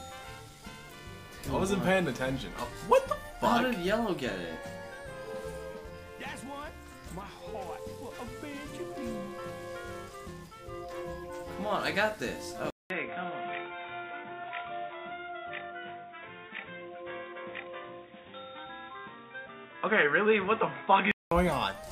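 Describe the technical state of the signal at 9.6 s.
At 9.6 s the signal is intact, with no dropout, distortion, glitch or other fault audible at that moment.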